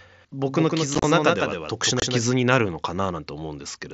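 From 0.48 to 2.24 s a doubled audio track is heard: a second, full-band copy about 5 dB quieter trails roughly 150 ms behind, starting and stopping abruptly, likely from a second, slower capture path. Within it, at 0.95 to 1.04 s, unconcealed Bluetooth headset packet loss cuts 52.5 ms of holes scattered over 90 ms, the longest 30 ms, giving abrupt, chopped gaps. A second 22.5 ms loss at 2.00 to 2.02 s leaves another abrupt hole, all over the light graininess of the mSBC headset link.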